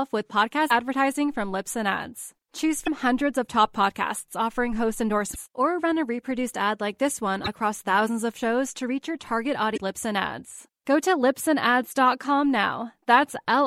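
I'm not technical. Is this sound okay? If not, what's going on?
No. At 0.67, 2.84, 5.32, 7.44 and 9.73 seconds the speech breaks into a brief glitch lasting about 40 ms. That is damaged data in a compressed stream: corrupted bytes make the decoder lose its place, briefly garble, then resync.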